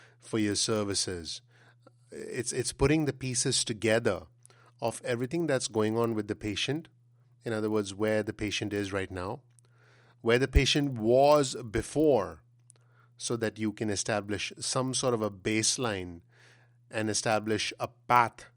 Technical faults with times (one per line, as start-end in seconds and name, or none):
0.00-18.56 resampler restarted on every block